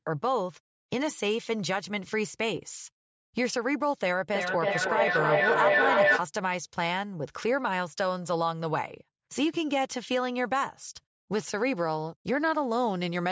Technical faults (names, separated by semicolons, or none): feedback howl